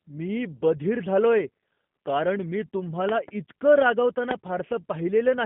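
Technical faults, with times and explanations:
Throughout, G.729 codec: the speech is band-limited to roughly 150 Hz to 3.5 kHz, with nothing above 3.6 kHz. It sounds plainly rough and synthetic because pulse-excited filter resynthesis replaces the original waveform, consistent with an 8 kbit/s G.729A line.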